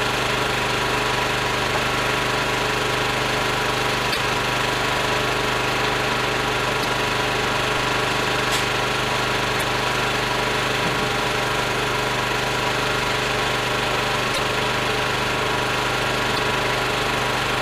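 Damaged data in a compressed stream hits this everyday-sound clip at 4.09–4.17, 6.83–6.85, 9.60–9.63, 14.30–14.39 and 16.36–16.39 s. Each time, the decoder loses frame sync and searches for the next header. The result is a brief glitch, heard as a chirp, squawk, click or short hole, visible as a narrow vertical discontinuity in the waveform and spectrogram.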